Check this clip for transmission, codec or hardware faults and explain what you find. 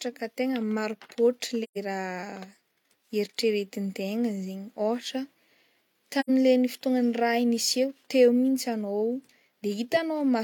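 The speech has two short dropouts from AAC frame loss with muting: one from 1.63 to 1.77 s and another from 6.20 to 6.29 s. The decoder lost frames, about three in the first gap and two in the second, and zeroed their spectrum. The overlapping windows then fade the sound down and back up, so each gap is a soft-edged silence of about 128 ms and 85 ms.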